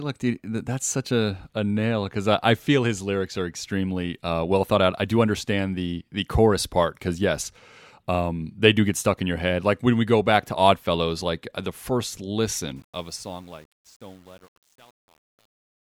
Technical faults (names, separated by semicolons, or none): truncation distortion on a fade